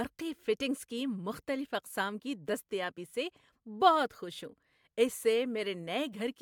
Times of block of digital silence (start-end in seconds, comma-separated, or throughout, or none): none